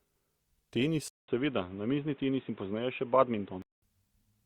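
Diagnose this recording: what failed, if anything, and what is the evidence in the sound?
Input switched to a poorer device, 1.08 to 3.82 s: after a 200 ms gap the speech turns boxy, with nothing above 3.8 kHz and a fresh noise floor roughly 30 dB down at similar loudness, clearing at 3.82 s. This is likely a driver-level switch to a narrower-band microphone.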